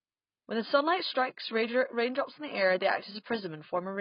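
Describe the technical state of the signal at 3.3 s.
At 3.3 s the speech sits under the heavy AAC compression that runs through the whole clip. Nothing comes through above 5.1 kHz, so it sounds dull and smeared, with a fizzy, warbly edge on sibilants. That's likely AAC-LC starved at something like 16 kbps.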